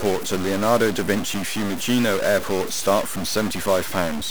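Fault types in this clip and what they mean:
Stuck bit: harsh buzz runs throughout, and pauses fill with loud noise; the waveform jumps by a fairly large step, likely one converter bit frozen, smearing broadband energy across the spectrogram.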